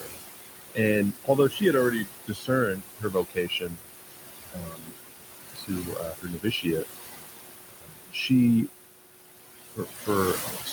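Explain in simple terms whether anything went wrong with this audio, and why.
The noise suppressor artifacts run through the whole clip. The room's background noise, which sits not far below the speech, sinks between phrases and rises again under them. Steady room noise alone would stay level.

Speech cut by the noise suppressor happens at 0.0–0.2 s, 1.24–4.15 s, 4.47–4.98 s, 5.45–6.84 s, 7.69–8.3 s and from 9.67 s to the end. There, quieter parts of the speech are turned down along with the background and sound swallowed, while the rest of the voice carries on.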